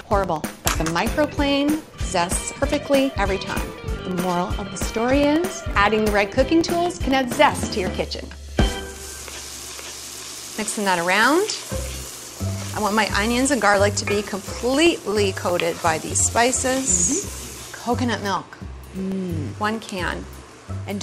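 From 0.11 s to 20.87 s, the audio has periodic USB or driver dropouts. Every 0.125 s, eight times a second, roughly a millisecond of signal vanishes and is replaced by silence. Something in the system is stalling the USB bus or the audio driver on a fixed schedule, and the stream loses samples each time. Well over a hundred gaps fall across this span. Each one is heard as an evenly spaced tick. The ticks are audible only where there is sound to interrupt.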